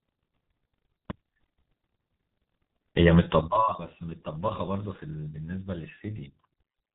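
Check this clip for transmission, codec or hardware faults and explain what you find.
One codec fault runs through the whole clip. G.723.1 codec damage, heavy, from start to end: low-rate frame-based coding at roughly 6.3 kbit/s strips everything above 3.8 kHz, leaving speech muffled, hoarse and smeared at consonants.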